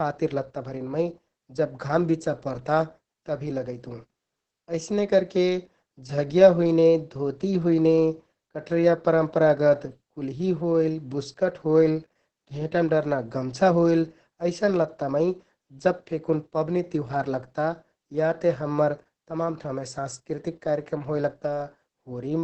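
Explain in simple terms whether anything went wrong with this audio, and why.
Opus voice compression affects the whole clip, from start to finish. The speech was squeezed hard by a voice codec that rebuilds sound from a simplified model of the voice and drops everything above about 8.4 kHz, so it sounds muffled, hoarse and slightly robotic.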